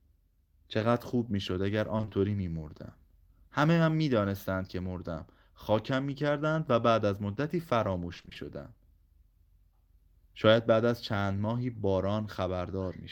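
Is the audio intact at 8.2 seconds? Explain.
No. Repeated packet loss runs from 8.13 to 8.37 s: six gaps of up to 20 ms, each patched by extending the preceding sound, so the speech turns choppy with pieces missing.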